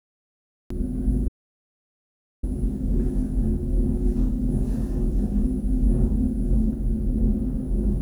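The first 0.70 s is digital silence. At 0.70 s the sound cuts in mid-event with no attack, a cut-off start where capture began late. From 1.28 to 2.43 s there is an audio dropout to silence. About 1.15 s of sound is replaced by silence with no background left, likely from a lost input or link.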